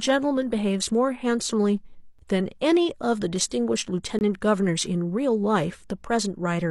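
At 2.19 s, and again from 4.19 to 4.21 s, the speech drops into hard-edged silence. That's a gap between stream segments: the 2-second segments' timestamps don't quite meet, so the player pads with about 6 ms, then 21 ms, of nothing. No speech goes missing.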